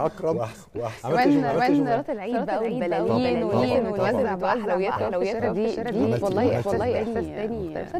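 A doubled audio track runs throughout the clip: every sound is followed by a second full-band copy, about as loud as the first and trailing by roughly 0.4 s, with no decay or room colour. This likely comes from a second capture path or an edit leaving two copies out of step.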